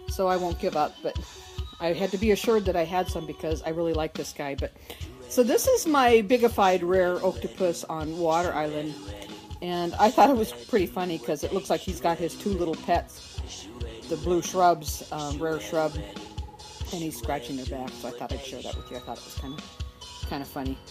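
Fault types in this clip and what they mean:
Nothing here to flag: no faults turn up anywhere in the audio.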